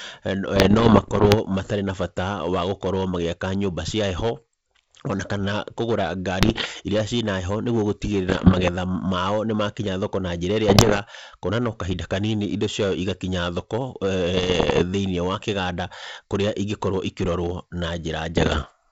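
Hard clipping runs through the whole speech recording. The input is driven about 9 dB past what the stage can pass, so around 3 percent of samples are cut flat. Those squared-off peaks add high harmonics, heard as a harsh fuzz on every loud syllable rather than occasional crackle.

Bit errors on an ADPCM link appear in six bursts: 0.56 to 1.36 s, 6.40 to 6.67 s, 8.27 to 8.69 s (just before "mao nimakĩnya thoko na"), 10.68 to 10.99 s (after "nimakĩnya thoko na njĩra"), 14.34 to 14.84 s (between "indo ciao igakinya thoko" and "thini wakiganda"), and 18.36 to 18.73 s. The error rate is about 1.5 to 3 percent, highest near 10.7 s. Each flipped bit throws off the decoder's step size and predictor, so the damage rings on for milliseconds as pops, rough bursts and brief level jumps over the G.722 wideband channel, whose coding itself adds little.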